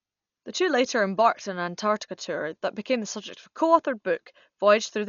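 From start to finish, the speech carries heavy codec damage, likely from Dolby Digital compression. Nothing is heard above 6.9 kHz, so the voice sounds dull and boxed in. That narrow band fits a very low bitrate, around 48 kbps. At that rate the encoder leaves many frequency lines without detail. The decoder fills the gaps with noise. The result is a rough, fluttering hiss that clings to the voiced sounds.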